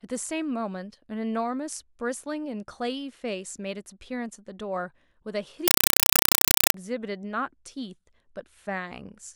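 At 5.68 s the speech gives way to a compressed stream played as audio, lasting until 6.74 s. A Dolby Digital (AC-3) bitstream has been passed through as if it were ordinary samples instead of being decoded, so each coded frame reaches the output as raw data. What is heard is very loud, chattering static: 4 ms bursts of noise separated by silent padding, repeating 31.25 times per second, which fits an AC-3 stream at 192 kbps.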